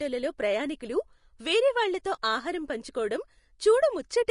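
From start to finish the speech carries plainly audible coding damage, likely Vorbis compression at a low setting, around 35 kbps. Nothing remains above about 10.6 kHz. The coarsely quantised treble turns into grainy hiss. Consonant attacks sound blurred and roughened.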